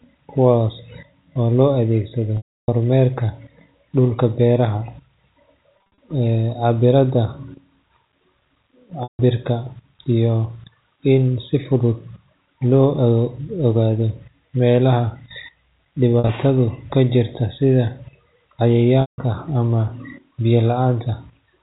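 Packets went missing on the network path of this speech recording, and the receiver's packet loss concealment bridged each gap by repeating the last pitch period and fading it out. At 2.37 to 2.68 s, right after "oo loo adeegsado", about 310 ms dropped, long enough that the held buzz fades to silence before the voice cross-fades back in. Further gaps fall at 5.98 s (150 ms scattered across 200 ms, runs up to 50 ms, heard as brief buzzy catches), 9.03 to 9.19 s, 16.13 to 16.29 s (80 ms scattered), and 19.01 to 19.18 s, just before "ama biyo". The loss pattern fits 10 ms packets, carried over G.711 mu-law telephone coding with its 4 kHz ceiling.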